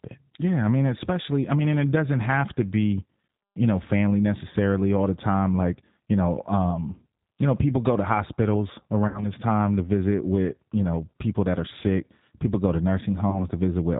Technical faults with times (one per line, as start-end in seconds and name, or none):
0.00-13.99 G.729 codec
9.08-9.28 VoIP packet loss concealed by the speech codec
13.30-13.47 VoIP packet loss concealed by the speech codec